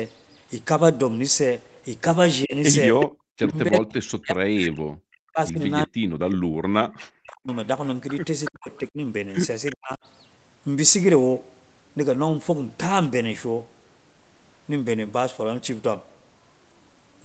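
At 2.45 to 2.54 s the speech dips by roughly 15 dB. This is speech suppressed in double talk, likely from the echo canceller ducking during overlap.

From 3.0 to 3.8 s an echo leak follows. A copy delayed by 377 ms is heard at roughly the speech's own level, likely residual loudspeaker echo.

From 3.07 to 3.38 s the background is gated by the echo canceller. Room sound drops by about 40 dB, then returns.

From 3.53 to 7.53 s, speech suppressed in double talk recurs. Around three seconds of it drops, at worst by roughly 40 dB, likely from double-talk ducking. At 6.29 to 6.35 s a brief echo leak appears, likely again from the loudspeaker, 377 ms late and roughly 15 dB down.

From 8.45 to 9.75 s the echo leak returns, likely from the same source. The delay is again 377 ms and the level roughly 15 dB below speech. Overlapping it, from 8.5 to 9.99 s, speech is suppressed in double talk, likely by the canceller. 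About half a second is cut, by up to roughly 40 dB.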